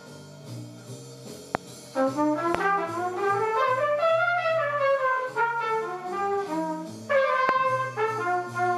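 Three loud pops land at about 1.55, 2.55 and 7.49 seconds, each a single sharp hit of roughly 20 ms, jumping well above the sound, which keeps running underneath. They're likely voltage spikes from a switch, connector or driver glitch.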